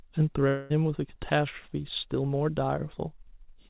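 From 0.48 to 0.72 s, a long network dropout likely cut the stream. The receiver fills the gap by stretching the last sound into a fading buzz, with no silence, before speech resumes.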